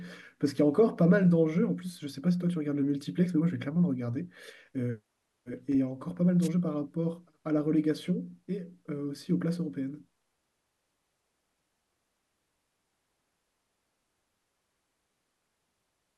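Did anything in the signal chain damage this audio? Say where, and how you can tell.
Yes. A brief swish of static from 6.41 to 6.49 s marks a wireless microphone noise hit at the radio link, before conversion. For about 70 ms the FM signal faded as reflected paths cancelled, so receiver noise rose.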